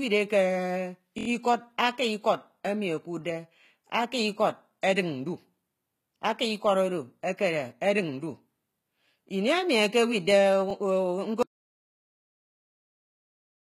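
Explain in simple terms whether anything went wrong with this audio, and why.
The speech has a gritty, metallic edge throughout, and nothing sounds above about 14.9 kHz. That likely comes from HE-AAC compression, which fakes the treble by copying lower sounds upward.

There are two repeated buffer stutters. At 1.18 to 1.28 s a tiny 23 ms slice plays five times in a row. At 10.70 s one plays twice. The device ran short of fresh audio and replayed its last piece.

Then there is an audio dropout to silence. From 11.43 s to the end the sound stops dead, with no room noise at all. The input was likely lost while recording continued.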